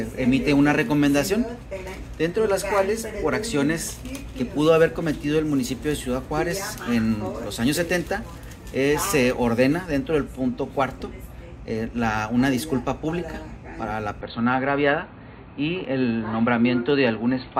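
At 14.21 s the sound abruptly turns dull and boxy until the end. Nothing remains above 4.5 kHz. There is no gap and no level jump. A faint new background noise sits far beneath it. The input was likely switched to a poorer device.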